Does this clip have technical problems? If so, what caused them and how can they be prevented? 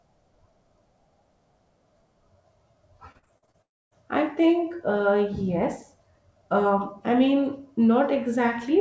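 Yes, there are two. From 3.12 to 3.56 s you get repeated packet loss with that robotic sound: six short holes, the longest about 44 ms, and roughly 38% of that stretch is patched rather than real audio. Each time a packet goes missing, the receiver stretches the last bit of sound to cover it, then the next hole hits right after, so it comes out choppy. A bigger jitter buffer, forward error correction, and a steadier network link would help prevent this.

Right after, from 3.62 to 3.93 s, the audio breaks off: a brief fading tail of the last sound, then about 270 ms of silence, and when it resumes roughly 0.3 s of material is simply gone. That pattern is likely a long network dropout, where nothing arrives at all, so the receiver can only smear the last fragment briefly before giving up. Preventing it mostly comes down to a more reliable connection, such as wired instead of Wi-Fi, or less competing traffic.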